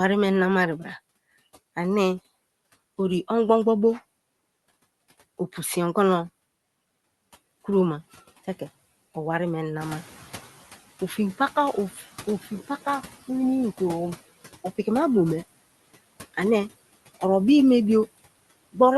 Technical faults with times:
0.00-18.97 noise suppressor artifacts
9.81-10.71 noise suppressor catching up
11.94-12.03 speech cut by the noise suppressor

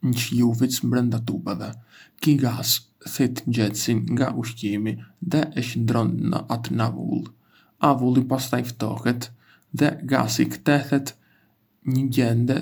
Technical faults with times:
none

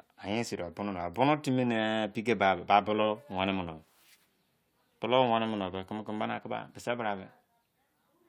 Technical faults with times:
none

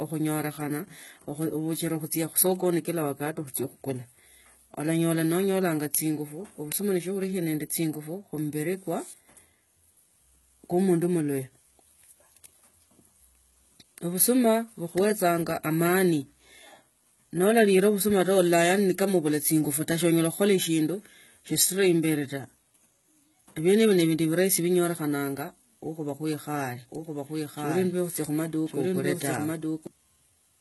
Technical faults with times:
0.00-30.60 HE-AAC compression
26.91-29.87 doubled audio track

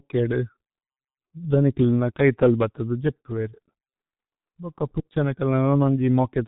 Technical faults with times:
0.00-6.48 G.723.1 codec

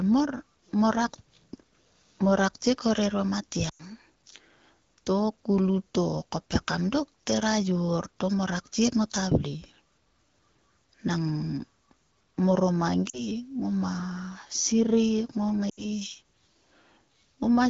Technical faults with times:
3.69-3.82 lost AMR speech frames
13.09-13.24 lost AMR speech frames
15.69-15.84 lost AMR speech frames

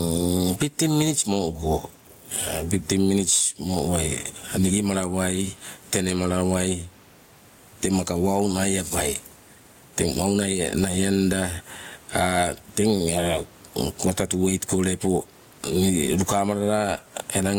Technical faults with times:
0.00-17.58 gain pumping

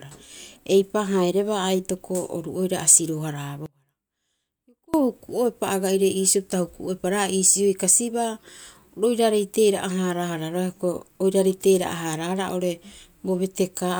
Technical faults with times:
3.66-4.94 audio dropout to a faint residue

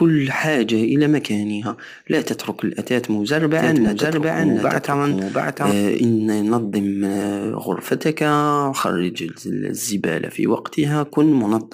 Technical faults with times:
3.58-5.72 doubled audio track
3.87-3.89 lost LE Audio frames
8.78-8.84 lost LE Audio frames

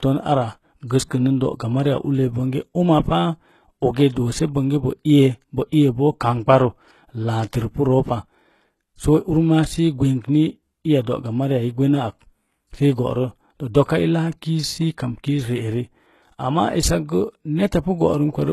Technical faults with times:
0.00-18.53 HE-AAC compression

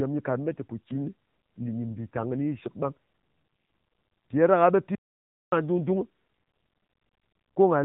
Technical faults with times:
4.95-5.52 audio dropout to silence

